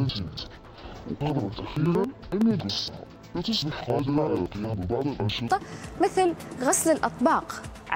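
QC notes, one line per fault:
0.00–5.57 s, interleaved audio read as planar: both halves of each 93 ms block play together at half speed, an octave low, doubled and choppy. Spectrogram shows halved harmonics and vertical seams at 10.8 Hz.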